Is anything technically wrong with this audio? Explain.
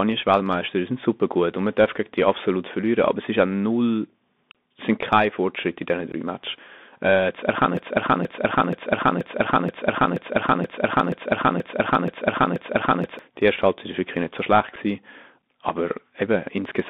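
Yes. The speech runs through a Bluetooth CVSD headset codec the whole way: nothing passes above about 3.6 kHz, s sounds turn scratchy and a granular hiss sits underneath, which points to a 64 kbps link.

Unconcealed Bluetooth headset packet loss occurs at 6.12 s and at 14.76 s, just after "wirklich nicht so schlecht". Each is a brief hole, about 15 ms and 7.5 ms, where a packet or two was replaced by silence or an idle pattern. The edges are abrupt, unlike the smoothed-over gaps that concealment would leave.

A broken-record loop follows "äh zu erkennen" from 7.77 s to 13.19 s. A 0.48 s fragment repeats exactly, back to back, 11 times, and the speech that should have played is lost. The repeats are identical, so this is not an echo or stutter. The likely cause is a stalled stream resending its last buffer.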